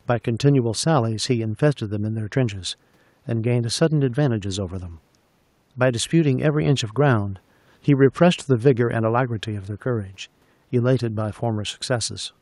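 No technical faults are audible.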